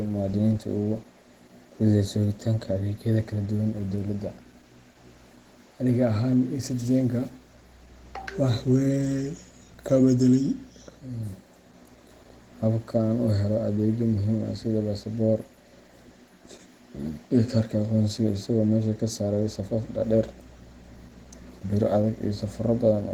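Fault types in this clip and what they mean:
Opus compression: plainly hoarse, grainy speech throughout, likely Opus hybrid mode near 16 kbps; spectrogram shows noise-filled bands up to 20.2 kHz with few holes.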